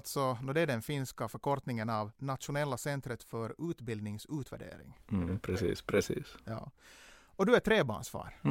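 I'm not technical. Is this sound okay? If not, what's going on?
Yes, nothing stood out as a problem when listening to this recording.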